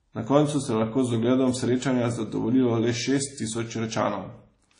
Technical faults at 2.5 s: WMA compression

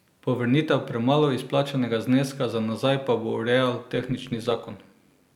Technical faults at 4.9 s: overlap-add ripple

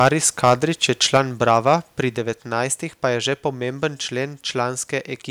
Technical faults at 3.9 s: none

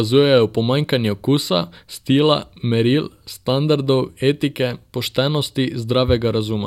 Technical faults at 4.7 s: none

